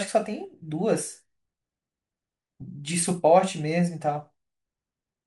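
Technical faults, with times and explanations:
No technical faults are heard in this speech clip.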